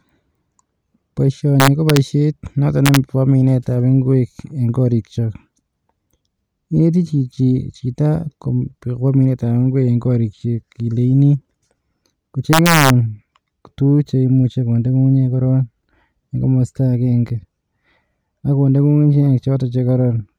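From 1.60 to 1.97 s the speech breaks into violent cracks. This is integer overflow. The signal reached the largest value the integer format can hold and wrapped to the opposite sign instead of being limited. Each peak snaps across the full range. The same cracking returns from 2.86 to 2.97 s. Both are driven right to the limit, about 0 dB over. From 12.53 to 12.90 s it recurs, about 1 dB over. These cracks are far harsher than clipping.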